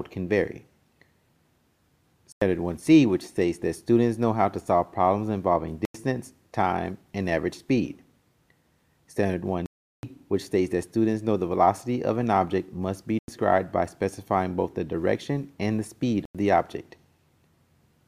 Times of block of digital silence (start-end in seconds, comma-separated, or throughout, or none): 2.32-2.41, 5.85-5.94, 9.66-10.03, 13.19-13.28, 16.25-16.35